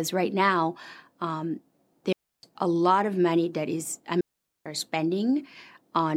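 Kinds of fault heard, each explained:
Digital wireless dropout: the receiver mutes the speech into clean near-silence for about 0.3 s and 0.45 s, with no noise burst or hiss, unlike an analogue dropout.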